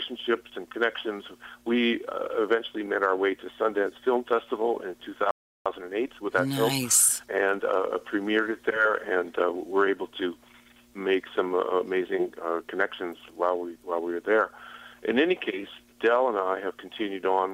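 At 5.31 s the audio stops dead in mid-flow. Silence holds until 5.66 s, a gap of about 0.35 s. This is a playback stall. The output went quiet because the player most likely ran out of data or had its processing thread blocked. Nothing reached the output until it recovered.

From 5.66 s to 7.96 s the sound runs hurried, at about 1.15 times normal speed. This is time-compressed catch-up. After the stall, the player had a backlog to clear. It trimmed small slices from the stream and cross-faded across the joins. Pitch stays at its normal level, but the pace is pushed forward. Normal speed returns at 7.96 s.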